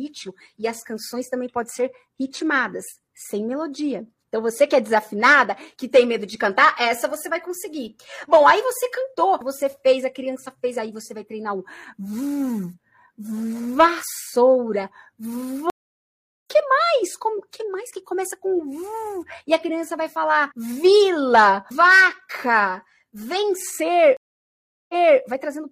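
At 15.70 s a stream reconnect occurs. The connection broke and the player fell silent for 0.76 s. A fresh decoder then resumed mid-stream, roughly 0.7 s further on, skipping material. A second reconnect at 24.17 s goes silent for 0.72 s, then resumes 325 ms earlier, repeating audio.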